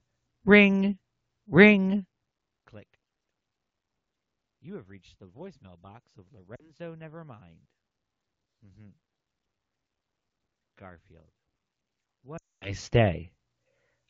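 Speech over an AMR wideband (HD Voice) link, consistent with about 12.65 kbit/s, shows lost AMR speech frames. After "the voicemail box of", 6.55 to 6.71 s, about 40 ms is concealed. From 12.37 to 12.72 s a 240 ms loss drops the sound to near silence before recovery.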